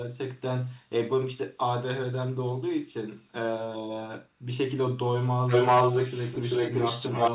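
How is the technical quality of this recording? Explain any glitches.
Telephone-band speech with one clear glitch near the end, an echo leak. From 5.47 s to the end of the recording, a second copy of the speech trails the original by about 0.39 s, and it is a few decibels louder than the direct speech. The overlap smears the words into a doubled, confusing wash. The likely cause is a far end on a loudspeaker whose echo canceller failed to remove what its microphone picked up, so that sound travelled back down the call. The whole recording also lacks anything above 4 kHz, which fits a narrowband call codec such as G.711.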